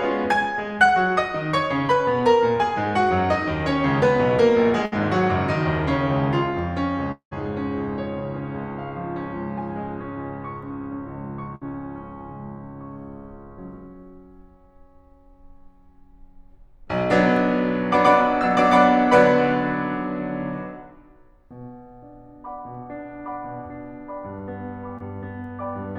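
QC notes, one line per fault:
4.85–4.94 s and 11.55–11.64 s, burst of packet loss: each time about 60 ms of the music goes missing. The receiver carries the last sound on for roughly 60 ms, fading it out, then jumps ahead. The second one also stretches the timing by about 7 ms.
7.12–7.33 s, long network dropout: about 200 ms of music vanishes. The last sound is extended as a fading tail for part of that stretch, with roughly 110 ms of near-silence, before playback picks up further along. This is likely a network outage where nothing arrived in time.
24.98–25.02 s, short concealed packet loss: only about 20 ms of audio is lost. The decoder patches it by continuing the preceding sound for around 22 ms and blending back in, so you hear a quick smear or tiny wobble.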